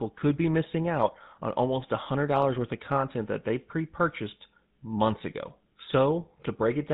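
GSM full-rate codec coding runs through the whole speech clip. The codec models the vocal tract and excites it with a sparse, regularly spaced pulse train, and it discards everything above 4 kHz. That leaves the voice dull and band-limited, with a plainly audible buzzy, gravelly roughness that fits a 13 kbps rate.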